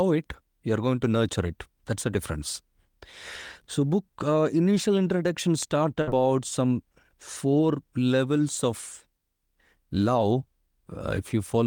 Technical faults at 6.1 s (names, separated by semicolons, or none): burst of packet loss